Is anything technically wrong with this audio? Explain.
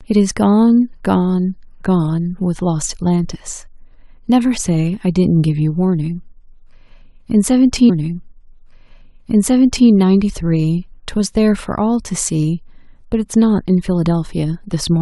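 Yes. From 7.88 to 9.88 s a stream segment is repeated: about 2.0 s of the speech plays a second time, with a small blip at the point where playback jumps back. The player fetched or queued the same chunk of the stream twice, so the duplicate is a whole segment. That sets it apart from a buffer stutter, which loops only milliseconds, and from a dropped segment, which loses material instead of adding it.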